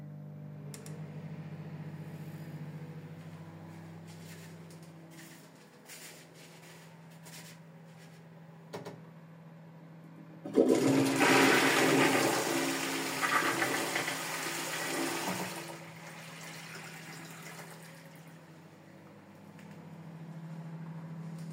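From start to finish, every sound arrives twice: a doubled audio track, with a second full-band copy trailing the original by roughly a tenth of a second and sitting a little quieter. The likely cause is the same signal being captured again through a slower path, or two copies held out of step. Unlike an echo or room reverb, the copy repeats only once, carries no decay or room colour, and stays fixed in timing throughout.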